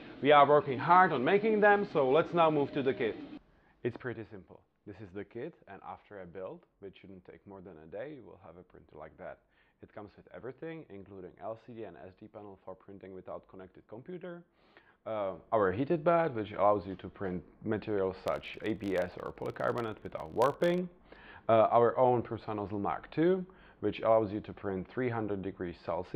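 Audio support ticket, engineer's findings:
Filter restarted on every block, 18.26 to 20.81 s. A steady 50 Hz buzz of regular ticks rides on the audio and tracks its level. Probable component: a block-based filter stage losing its state between blocks, so each block starts from silence and opens with a small transient. The 50 Hz rate points to 20 ms blocks.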